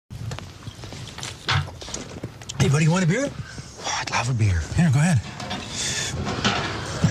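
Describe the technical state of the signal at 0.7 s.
At 0.7 s the signal is intact, with no audible fault at that point.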